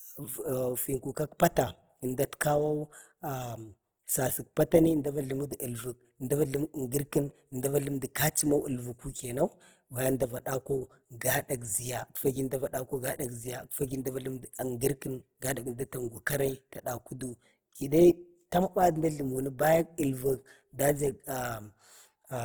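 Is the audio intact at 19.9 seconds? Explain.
No. At 19.9 s, as throughout the clip, the speech carries plainly audible Opus compression, likely from CELT-mode encoding at a rate that fits roughly 16 kbps. Band energies survive, but starved bands are filled by folding or noise, so tones sound grainy and rough while bandwidth stays near 20.3 kHz.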